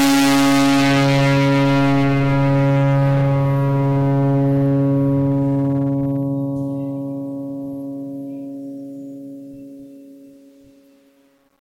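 Hard clipping runs through the whole music clip. The signal is driven about 29 dB past what the chain can pass, so roughly a third of the samples get sliced flat. Those squared-off tops spray harmonics high up, giving a harsh fuzz on every loud moment.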